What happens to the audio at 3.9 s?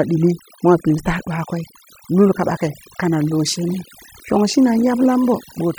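At 3.9 s the gaps around the voice fall to an unnatural near silence scattered with twinkling, chirpy specks. This is overdone noise removal, present across the whole clip rather than just at that moment. A noise reducer set far too aggressively is pulling individual frequency bands down or switching them off whenever they sit close to its noise estimate, and the quieter parts of the voice are removed along with the noise.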